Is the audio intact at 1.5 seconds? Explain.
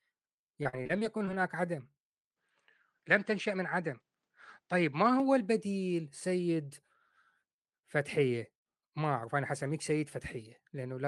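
No. Around 1.5 s the speech sits inside a jitter buffer slow-down running from 1.03 to 1.67 s. The receiver's buffer ran low or had just raised its target delay, so it stretched the audio to rebuild a reserve, repeating single pitch periods and slivers of pause until about 56 ms had been added. The passage plays at roughly 92% speed with its pitch unchanged, so sounds come out drawn out and can carry a faint warble.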